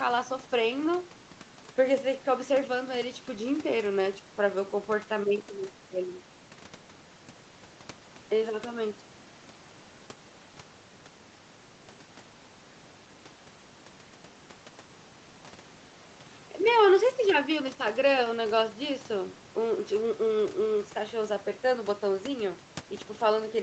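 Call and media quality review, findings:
No faults found in this speech clip. Audio tops out around 8 kHz, consistent with the call microphone processing and the Opus call path, with room noise sitting about 25 dB below the speech.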